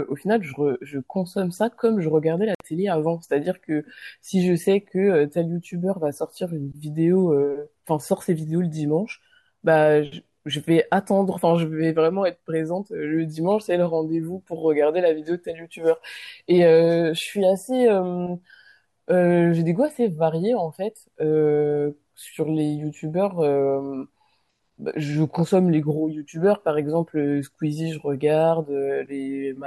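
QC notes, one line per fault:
2.55–2.60 s, Bluetooth dropout: the speech drops to silence for 56 ms. It then resumes further along, as though it had kept playing through the gap. This is likely audio packets reaching the headphones too late and being discarded, which fits about three lost packets.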